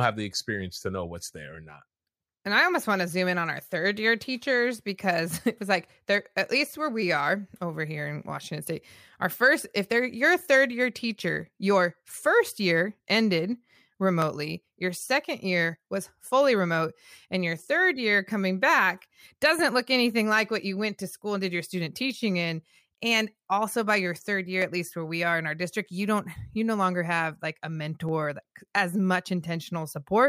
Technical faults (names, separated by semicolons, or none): dropped samples